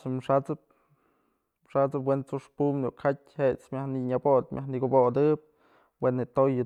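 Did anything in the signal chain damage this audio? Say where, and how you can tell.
No, nothing in the signal chain damaged this audio.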